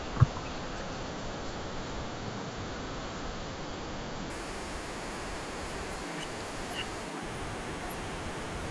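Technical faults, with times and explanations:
4.30–8.70 s, wrong sample rate. From 4.30 s to the end, the speech suddenly runs fast and sounds high. Everything plays 1.5 times quicker, and the pitch rises about 7 semitones, close to a musical fifth. Speed and pitch shift together because the samples are read out faster than they were captured, with no rate conversion. That fits audio recorded at 16 kHz being played at 24 kHz.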